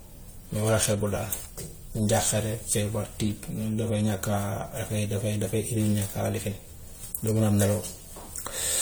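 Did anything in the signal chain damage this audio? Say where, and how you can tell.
Yes. The damage sits at the codec stage and runs through the whole speech clip as generation loss. The sound is swirly and hollow, and consonant attacks are smeared. Yet content reaches 20.1 kHz, so this isn't the band-limited dullness of a single low-bitrate encode. The likely cause is a lossy encode repeated about four times, which fits AAC-LC at around 64 kbit/s. Each pass requantises on a shifted frame grid, so the noise and spectral holes build up.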